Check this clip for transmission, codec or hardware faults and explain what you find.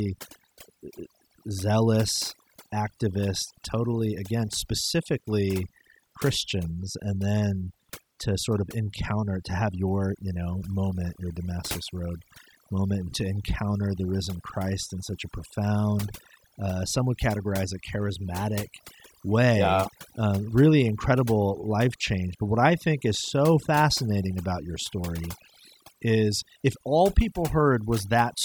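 One fault runs through the whole speech clip: overdone noise removal. The background drops to near silence dotted with twinkling, chirping specks, and the voice has its softer edges hollowed out. A noise reduction stage set far too aggressively is at work, cutting individual frequency bands down or out whenever their level sits close to its noise estimate. The quieter parts of the voice fall under that threshold and are removed along with the noise.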